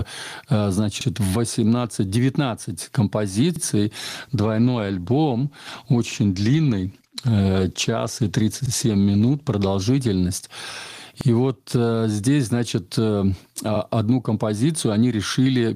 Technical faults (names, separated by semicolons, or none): gain pumping; overlapping chunks; call bitrate drop